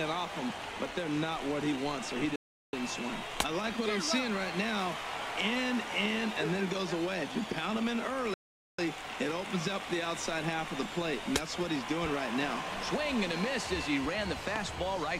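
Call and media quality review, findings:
Playback stall, 2.36–2.73 s (372 ms) and 8.34–8.79 s (444 ms): output drops to silence mid-flow, then resumes. Likely player buffer underrun or blocked audio thread.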